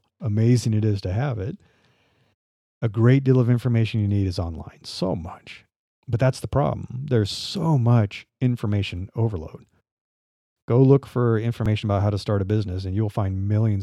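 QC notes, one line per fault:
11.66 s, dropped buffer (overrun): the software likely failed to read a block of samples before the hardware overwrote it, so roughly 20 ms of audio vanished and the two edges were butted together. No silence remains; the speech jumps forward.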